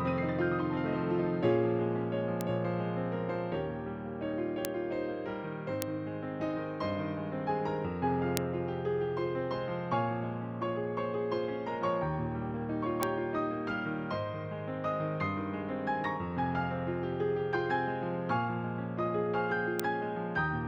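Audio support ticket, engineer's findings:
Bit error spikes, six single isolated ticks at 2.41, 4.65, 5.82, 8.37, 13.03 and 19.80 s, about -6 dBFS (first about -12 dBFS). One-sample spikes, two samples at 8.37 s. Flipped bits in memory or a digital link. Waveform: lone needles, signal returns immediately. Spectrogram: thin full-band vertical lines.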